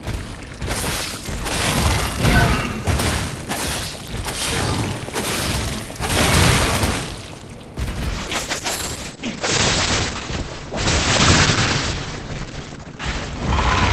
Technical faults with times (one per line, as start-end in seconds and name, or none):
8.11-13.93 call bitrate drop